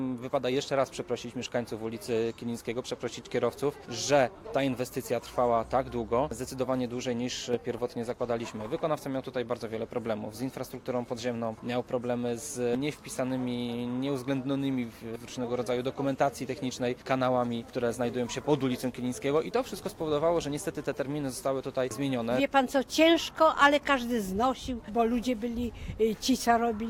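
No technical faults are audible anywhere in the clip.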